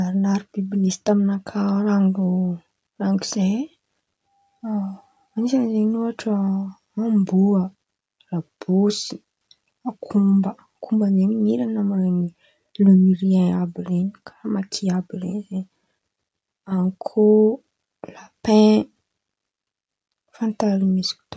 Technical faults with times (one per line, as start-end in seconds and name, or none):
none